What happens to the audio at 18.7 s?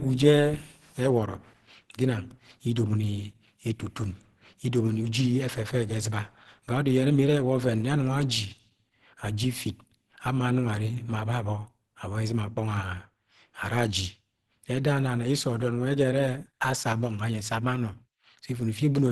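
At 18.7 s the speech carries the same damage heard from start to finish, most likely Opus compression. It sounds muffled and hoarse, with a rough, grainy edge on voiced sounds, which fits the codec's hybrid speech mode at a low bitrate, around 16 kbps. Nothing is left above about 12.1 kHz. On a spectrogram the energy stops at a flat ceiling near 12.1 kHz, and the bands below look smeared and noise-filled rather than finely detailed.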